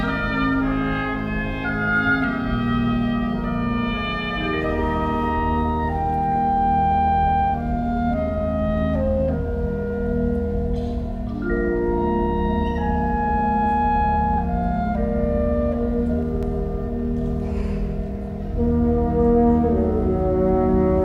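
Around 16.23 to 16.63 s there's a short burst of CD scratch ticks: three tiny clicks, each only a fraction of a millisecond, spaced about a fifth of a second apart. A blemish on the disc is beating the error correction once per revolution, so the player patches over the damaged samples.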